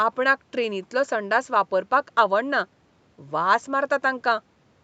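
Listening closely to the speech turned up nothing that stood out as a technical problem.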